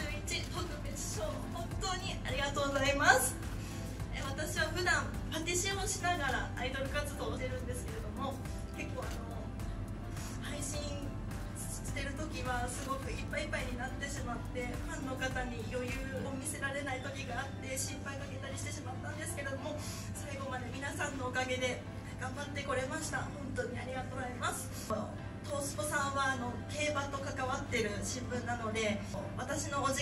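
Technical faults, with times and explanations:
7.36 to 7.38 s, 16.23 to 16.25 s and 24.13 to 24.15 s: damaged data in a compressed stream. Brief 20 ms blips where corrupted frames knocked the decoder out of sync. They show as thin broadband vertical streaks on a spectrogram and abrupt waveform breaks.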